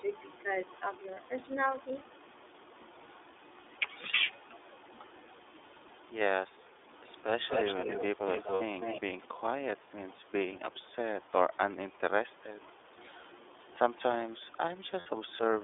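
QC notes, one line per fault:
throughout: iLBC codec. The speech is confined to a telephone band of roughly 300 Hz to 3.6 kHz, with nothing above that, and it has a plainly audible rough, slightly synthetic edge. That fits iLBC at 13.33 kbps with 30 ms frames. The codec rebuilds each frame's excitation on its own rather than predicting from the previous frame, so each frame is coarse, but the damage never builds up from one frame to the next.
1.14 s, 8.54 to 8.61 s, 15.00 to 15.07 s: lost iLBC frames. At each spot the speech turns briefly into a held, faintly buzzy vowel, 30 ms at 1.14 s and 60 ms at the other two. The decoder fills each lost frame by repeating the last pitch cycle mixed with noise. Because every iLBC frame stands alone, the speech comes back cleanly on the first good frame after each gap.
7.32 to 9.01 s: echo leak. A second copy of the speech trails the original by about 243 ms, only about 5 dB below the direct sound. 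This is likely an echo canceller on a loudspeaker end failing to remove what its microphone picked up from the loudspeaker, so the leftover went back down the line.
9.27 to 9.42 s, 9.75 to 10.32 s, 12.34 to 12.88 s, 14.34 to 14.55 s: speech suppressed in double talk. The speech dips in level at each of these points, by about 5 dB at 9.3 s and 12.3 s and by about 15 dB at 9.8 s and 14.3 s. The likely cause is an echo canceller that heard both sides at once, could not tell its own talker from the loudspeaker echo, and turned everything down.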